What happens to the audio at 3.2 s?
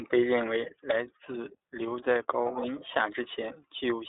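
iLBC codec coding is present at 3.2 s, as it is throughout the clip. Each short frame, consistent with 20 ms, is coded independently, and the band is cut to roughly 300 Hz to 3.7 kHz with nothing above 3.8 kHz, leaving the speech muffled, slightly rough and synthetic.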